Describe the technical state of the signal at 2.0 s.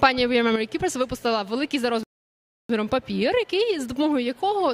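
At 2.0 s the signal is still sitting about 7 dB lower than it was before 0.56 s, the result of a sudden gain jump that holds from 0.56 s to the end. The level and the background noise dropped together in a single step, likely a gain setting applied with no ramp. On the waveform the envelope shows a hard, vertical step down at 0.56 s, and on a spectrogram every band dims at once, with a possible thin broadband line at the step.

Just after, from 2.03 s to 2.70 s, a rebuffering stall cuts the sound to dead silence for about 660 ms. The playback ran dry and waited for more data, then resumed exactly where it stopped, so nothing is missing but the clip is stretched by that gap. The waveform shows a flat line across the stall, and the spectrogram shows a fully blank vertical band with abrupt edges on both sides.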